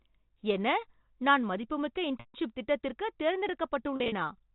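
Packet loss with pitch repetition hits this telephone-band speech at 2.20–2.34 s and 3.96–4.12 s. At those points the receiver loops the last pitch period across the missing audio and fades it, giving a held, buzzy sound. The first gap is a continuous 140 ms loss. The second is 100 ms scattered over 160 ms in runs up to 40 ms, which fits 20 ms packets. Throughout, the G.711 mu-law coding caps the band at 4 kHz.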